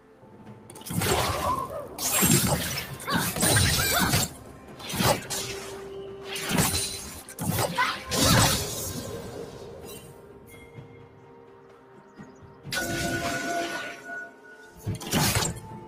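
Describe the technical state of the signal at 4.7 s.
At 4.7 s the sound dips and thins, sitting lower than what surrounds it, with its sustained part sinking rather than holding. This is sound cut by the noise suppressor, running from 4.29 to 4.83 s, about half a second, with the deepest drop about 5 dB. The suppressor judged this material to be noise and pulled it down harder than the rest, trimming its body and decay while leaving any sharp onset largely intact.

Underneath that, the same moment carries the wider fault present across the whole clip: a noise suppressor applied to music or sounds. A processor designed for speech keeps treating held tones, ambience and reverb tails as unwanted noise, so the level swings by roughly 10 dB as it clamps down and releases. The result is pumping and fluttering, with tails that fade early and a thinner overall sound.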